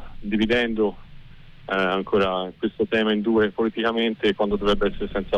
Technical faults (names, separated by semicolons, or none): none